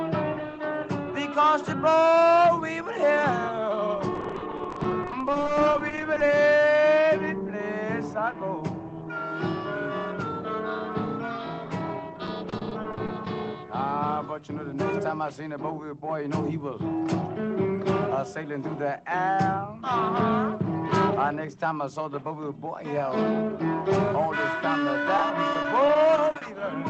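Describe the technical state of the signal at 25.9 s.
At 25.9 s the signal sits inside a stretch of repeated packet loss (robotic sound) running from 25.17 to 26.61 s. Over that span packets repeatedly went missing or arrived too late, and the receiver covered each hole by extending the last sound it had, in ten short gaps of up to 40 ms each. The result is choppy audio with small pieces dropped, heard through a call path whose sound tops out around 8 kHz.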